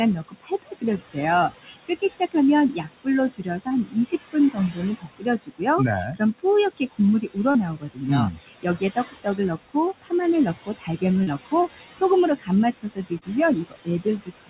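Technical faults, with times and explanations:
Throughout, noise suppressor artifacts: the suppressor pulls down bands it judges to be steady noise, by about 17 dB, frame by frame. The room noise, about 12 dB below the speech, sinks between phrases and swells back underneath them, leaving a residue over audio band-limited at 4 kHz, which fits a G.711 call codec.
0.28–14.49 s, speech cut by the noise suppressor: across nearly the whole clip the suppressor mistakes parts of the speech for noise and turns them down with the background, by about 22 dB at the deepest. Soft consonants and word endings come out swallowed or faint.
3.68–3.73 s, 7.51–7.57 s, 11.23–11.30 s, 13.19–13.24 s, short concealed packet loss: at each point about 30 ms of audio arrived too late to decode. The receiver extended the preceding sound for roughly 23 to 32 ms, then blended back into real audio, heard as a brief smear or wobble.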